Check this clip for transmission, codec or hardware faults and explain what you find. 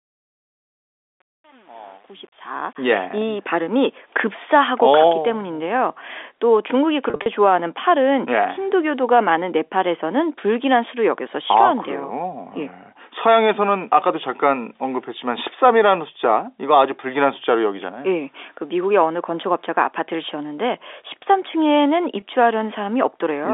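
Two brief transmission faults occur, both packet loss with pitch repetition, heard through telephone-band G.711 coding. From 7.10 to 7.26 s, about 120 ms of speech goes missing in scattered pieces across 160 ms, with the longest run 40 ms, consistent with around six lost 20 ms packets. At 22.20 to 22.22 s a single 20 ms gap follows. Each time the receiver loops the last pitch period, so the sound turns into a short, buzzy, held tone rather than falling silent or clicking, which is how it differs from a plain dropout.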